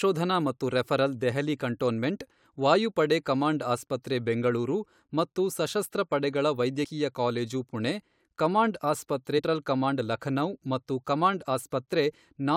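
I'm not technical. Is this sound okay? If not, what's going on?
No. Two brief glitches, at 6.84 s and from 9.37 to 9.39 s, come from damaged data in a compressed stream. Part of the stored file was corrupted, so the player briefly misread it and had to find its place again, producing a short chirp or blip.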